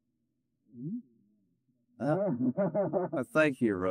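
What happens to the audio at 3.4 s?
At 3.44 s there is a single sharp click, a brief tick that shows as a thin vertical line running up the spectrum. It is most likely dropped samples: the stream skips ahead, so the waveform leaps straight from one value to a later one instead of moving smoothly. The gap is tiny, fitting the loss of around one sample, far too short to remove any audible sound, so only the click remains.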